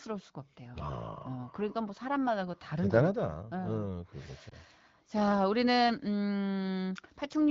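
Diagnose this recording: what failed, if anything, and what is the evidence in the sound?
At the network stage, radio errors corrupted AMR wideband speech data: a frame failed its checksum and the decoder had to conceal it. Between 4.49 and 4.54 s the speech shows a brief dip or warble. The decoder repeated the previous pitch and vocal tract settings at reduced gain in place of the missing audio. The effect is short enough to point to a single lost 20 ms frame, with the 12.65 kbit/s HD Voice speech coming back weak or rough for a moment after.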